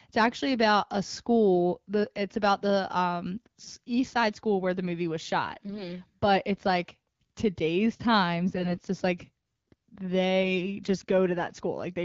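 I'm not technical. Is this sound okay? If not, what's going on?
No. The phone link dropped to a weak signal, so some less-protected bits in the digital voice data arrived flipped. These are AMR bit errors. The speech keeps its pitch and loudness but turns hoarse, scratchy and gargly at 3.63–3.74 s, 5.65–5.84 s and 8.55–8.84 s.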